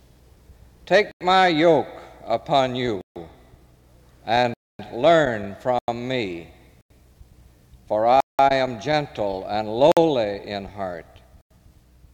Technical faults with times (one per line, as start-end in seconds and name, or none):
1.11-1.21 block of digital silence
3.01-3.16 block of digital silence
4.54-4.79 block of digital silence
5.79-5.88 block of digital silence
6.81-6.90 block of digital silence
8.20-8.39 block of digital silence
9.92-9.97 block of digital silence
11.41-11.51 block of digital silence